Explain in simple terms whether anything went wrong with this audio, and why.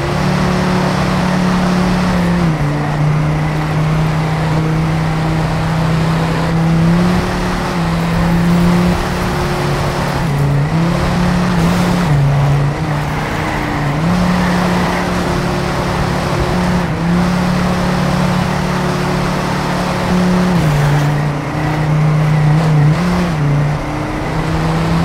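Something did go wrong, briefly: there's an underrun with held sample at about 11.49 s. For roughly 5 ms the playback ran out of data, so the output just froze on its last value instead of moving. That flat spot makes the sound stop for an instant, with hardly any click going in. Nothing was skipped while it waited; playback carried on right where it left off, so coming out of it is soft too.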